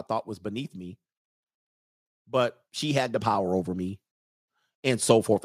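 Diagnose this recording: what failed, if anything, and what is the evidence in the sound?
The call processing stage misbehaved: there's an automatic gain rising from 2.3 s to 4.05 s. Over those 1.75 seconds the level climbs by about 5 dB, and the voice and background noise swell together. That's the AGC deciding the input was too quiet and slowly cranking its gain.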